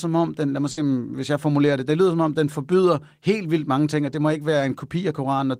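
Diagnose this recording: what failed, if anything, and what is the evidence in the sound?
A burst of packet loss at the network stage, from 0.71 to 0.79 s. Rather than falling silent, the speech is stretched: the receiver repeats what it last received and fades it down over about 60 ms, giving a held buzz or a thinning hiss. When the audio resumes, about 60 ms of speech is simply gone. That pattern of concealment followed by a skip, spanning several packets, separates it from a single lost packet or a plain dropout to silence.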